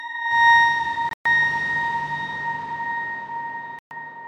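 Wireless packets likely missed their delivery deadline twice, a Bluetooth dropout. Between 1.09 and 1.26 s about 142 ms of sound is lost in broken gaps, the longest 122 ms; at 3.79–3.91 s a 122 ms hole follows. Sound resumes further on, as if it played on.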